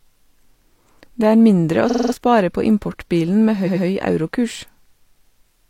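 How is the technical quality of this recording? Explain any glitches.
The speech has two stutters where a short piece plays again and again. At 1.86 to 2.10 s a fragment of about 46 ms is heard six times in a row, adding about 0.23 s. At 3.63 to 3.81 s a longer piece of about 93 ms plays three times, adding about 0.19 s. Both are repeated frames: the encoded data was written or sent more than once, so the decoder replays the same blocks. The block lengths fit codec frames of about 46 ms.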